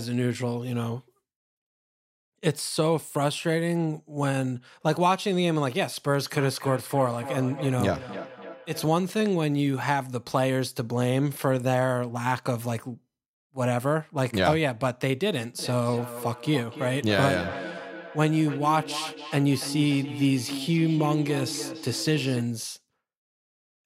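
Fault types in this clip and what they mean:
Feedback echo between two devices: From 6.26 to 9.01 s and again from 15.59 to 22.51 s, the speech returns at a steady interval of around a third of a second, peaking about 10 dB below the voice. It happens because a second device in the room replays the call, and only the original device's echo cancelling catches its own playback.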